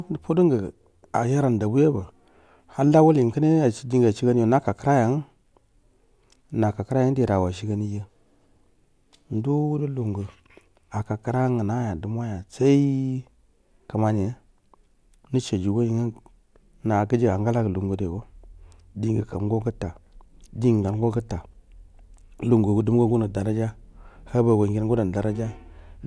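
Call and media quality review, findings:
No faults found in this speech recording. No defect was heard in the call or media path, so no component needs follow-up.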